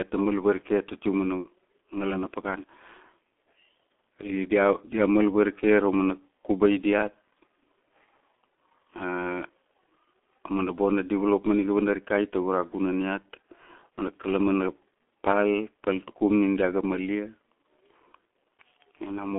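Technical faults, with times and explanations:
Throughout, G.723.1 codec: The speech is muffled and hoarse, and consonants smear together. Nothing reaches above about 3.7 kHz, and the sound sits in a narrow telephone band of roughly 250 Hz to 3.4 kHz. The damage is heavy. The codec codes speech in 30 ms frames with a slowly updated voice model. Quick consonant detail falls between updates and comes out blurred. The coarseness fits a rate near 6.3 kbit/s.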